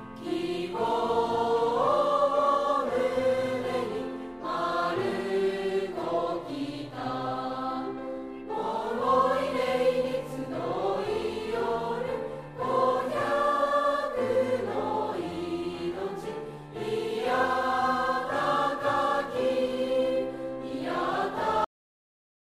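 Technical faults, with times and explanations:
21.64 s, cut-off end: the sound stops mid-event and drops straight to digital silence, which holds for the remaining 0.8 s. The final buffers were never written or played out, so there is no decay and no tail. That separates it from a natural ending or fade-out, which would taper away, and from a mid-clip dropout, because the sound never resumes once the silence starts.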